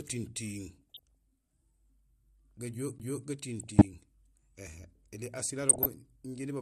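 A speech recording with plainly audible coding damage throughout. The sound is dull and granular, with a gurgling quality. Upper bands seem to thin out and return. This is likely MP2 compression. MPEG Layer II divides the signal into 32 sub-bands and rations bits among them. At a rate that sounds to be around 80 kbps, high bands get dropped and the rest are quantised coarsely. DAB burbling appears three times: from 0.73 to 1.15 s, from 3.60 to 3.85 s, and from 5.67 to 5.86 s. Bit errors have slipped past the error correction into the MP2 data. Corrupted samples then put short blips of noise into single sub-bands, and corrupted scale factors make sub-bands leap in level for up to a frame. The effect fits a weak broadcast signal with a low error rate. At 2.98 s there is a CD skip. A very short mute, about a hundredth of a second, is heard as a tick. The speech then resumes from another point. 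A knock or disc flaw threw the laser to a different turn of the spiral. The player silenced output briefly and carried on from the new position.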